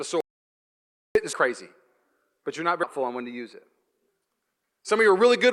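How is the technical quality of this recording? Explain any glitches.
The recording has two kinds of glitch: one long gap of silence and three jumps where stretches of audio are missing.

From 0.20 to 1.15 s there is an audio dropout to silence. The input was most likely lost, perhaps from a disconnect or mute, while silence kept being written. Speech stops dead, leaving about 0.95 s of total silence with no room tone.

Compressed frames skipped occur at 1.33 s, at 2.83 s between "but you're not" and "on when to use", and at 4.08 s after "when to use it". Each time the decoder dropped whole 32 ms frames, so speech leaps ahead by roughly half a second, 0.3 s and 0.1 s respectively.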